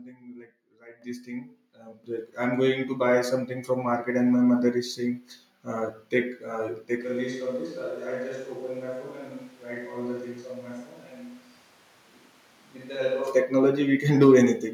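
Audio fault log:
1.02 s and 2.04 s, microphone volume stepped up: The voice and the background jump louder together, in two sudden steps. The first is about 10 dB. The second adds about 8 dB more. Both change at once because the rise happens at the input, before anything separates voice from room. It sounds like automatic level control raising the device's input volume when it judged the microphone too quiet. Nothing fades; each step is instant.
7.02–13.27 s, switch to a distant microphone: At 7.02 s the voice suddenly turns roomy and hollow. The bass thins out. The level drops by roughly 10 dB. Room noise rises to sit roughly 25 dB below the voice, so the background is more audible. At 13.27 s the close sound returns just as abruptly. The likely cause is the close microphone's signal dropping out, leaving one further from the talker, such as a camera microphone.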